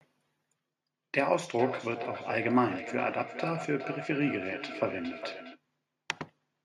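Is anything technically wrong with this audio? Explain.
Yes. Feedback echo between two devices, 1.59 to 5.62 s: a second device replays this microphone's signal, which is recaptured, so the speech repeats roughly every 400 ms, peaking about 10 dB below the speech, thinner and ringing.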